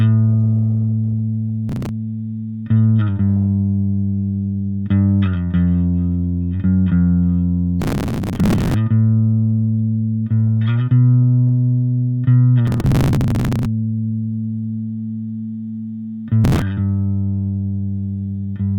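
Processor overload crackle shows up four times, at 1.69–1.89 s, 7.82–8.74 s, 12.67–13.65 s and 16.44–16.62 s. The processor keeps missing tiny buffer deadlines, which sounds like something around 3 ms, and each one is skipped, so you get gritty, tearing crackle riding on the sound.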